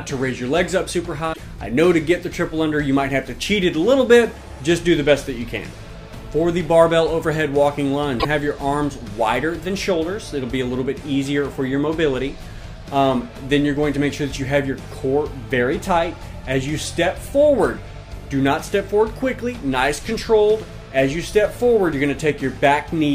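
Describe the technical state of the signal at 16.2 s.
Around 16.2 s the signal is intact, with no dropout, distortion, glitch or other fault to be heard at that moment.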